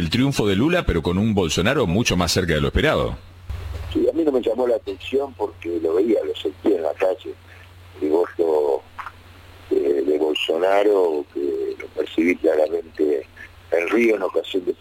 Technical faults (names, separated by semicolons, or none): periodic USB or driver dropouts